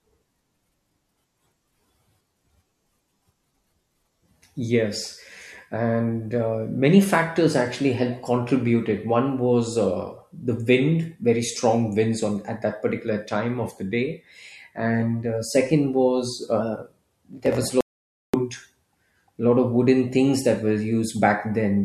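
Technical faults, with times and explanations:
17.81 to 18.34 s, audio dropout to silence. The speech cuts off mid-flow and resumes about 0.53 s later. The gap is silent, with no room tone at all. The input was likely lost while recording continued, so silence was written and that stretch of speech is gone.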